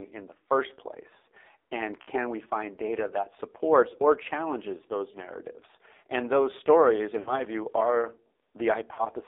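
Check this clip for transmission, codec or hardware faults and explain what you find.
Two faults are audible in this speech clip: heavy narrowband mobile coding throughout, and four short dropouts from lost frames.

AMR narrowband mobile codec, throughout: a low-rate vocal-tract model, fitting roughly 5.9 kbps, confines speech to 300 Hz–3.7 kHz, leaving it buzzy and synthetic.

Lost AMR speech frames, at 2.02–2.10, 5.12–5.18, 7.20–7.40 and 8.94–9.06 s: the decoder repeats the last good settings at falling gain, producing brief warbles and fades before speech returns roughly.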